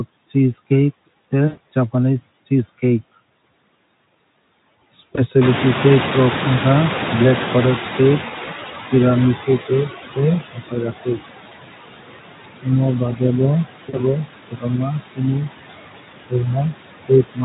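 Noise suppressor artifacts run through the whole clip. The suppressor estimates the steady background and pulls those bands down by about 18 dB, frame by frame, so the noise floor drops away in the pauses and comes back up underneath the speech.

VoIP packet loss concealed by the speech codec first appears at 1.47–1.61 s, just before "japanese cheese". About 100 ms of audio went missing, and the decoder bridged the gap by extending its last pitch and filter state while lowering the gain. The result is a stretched buzzy tone or coloured noise that fades out, and the speech stays weak for a moment after real audio resumes. Shorter gaps of about 20 ms occur at 5.15–5.21 s, 8.45–8.50 s and 11.49–11.56 s, and one of about 40 ms at 13.89–14.02 s. Each of these is a brief smeared or buzzy blip.

The noise suppressor catching up begins at 5.41 s. At about 5.5 s the room noise jumps by roughly 19 dB, ending up only about 7 dB below the speech. 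The suppressor's noise estimate lags behind this change, so the new noise first comes through with little reduction. It then sinks gradually until about 9.99 s, when the estimate has settled at a cut of about 15 dB.

Speech cut by the noise suppressor happens where the suppressor mistakes parts of the speech for background and turns them down with it. At 9.36–9.48 s a short stretch dips by up to about 9 dB. At 10.41–11.18 s, around 0.4 s of speech in total is pulled down by as much as about 19 dB. At 13.00–13.22 s the drop reaches about 12 dB. At 17.04–17.44 s, the end of the clip, it reaches about 22 dB. In each case soft sounds and word endings come across as swallowed or faint. The Speex coding underneath shows little or no damage of its own.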